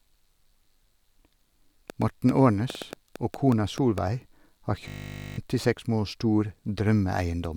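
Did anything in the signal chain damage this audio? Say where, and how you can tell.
Yes, in two places. From 1.90 to 3.99 s there's a train of clicks: about ten pulses, roughly 5.3 per second, unevenly spaced and peaking about 10 dB above the speech. That's likely interference from nearby gear or a struggling interface getting into the analogue wiring.

At 4.88 s there's a system hang loop at the driver or buffer stage. A single 20 ms slice repeats 25 times until 5.38 s, so you get a steady 50 Hz buzz where the speech should be. The system froze while the hardware kept cycling one ring buffer, and about half a second of audio is lost.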